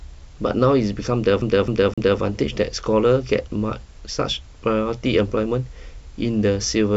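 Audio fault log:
1.42 to 2.20 s: CD stuck on one turn. The same 0.26 s slice of speech plays three times in a row. A short mute marks each jump back. The stutter is fast and perfectly even, like a skipping disc. A scratch at one point on the disc keeps knocking the laser back a track. Each turn of the disc lands it on the same spot, so the loop length never changes.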